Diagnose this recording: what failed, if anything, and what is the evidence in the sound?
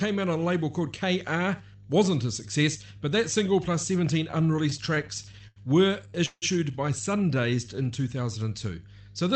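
Mains hum sits under the whole recording. It is a steady 50 Hz tone, roughly 20 dB below the signal. The stage is analogue wiring. A ground loop or a nearby transformer is feeding the power line into the signal before conversion.

Repeated stalls (stutter) run from 4.31 to 5.58 s. The audio catches 15 times, adding about 228 ms in all. The longest hold is 84 ms, and nothing is lost. The cause is the network and jitter buffer. Packets kept arriving late, so the receiver repeatedly stretched the last sound.

A call audio freeze occurs from 6.26 to 6.44 s. The sound holds and fades for 161 ms, ending in 40 ms of silence. Then it resumes exactly where it stopped. The likely cause is packets held up in the network, which emptied the jitter buffer.

A jitter buffer slow-down occurs from 7.34 to 7.76 s. The audio plays at 87% speed without any change in pitch, adding 61 ms. Sounds are drawn out. 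The stage is call processing, where the receiver repeats pitch periods to rebuild its buffer reserve.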